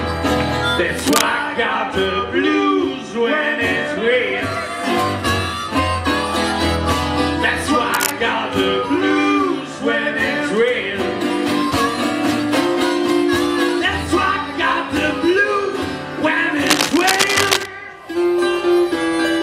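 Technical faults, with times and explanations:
0.99–1.22 s, 7.94–8.12 s, 16.66–17.66 s: cable scratch noise. Uneven scratching bursts near signal level, middle one quieter, likely from a worn connector shifting contact.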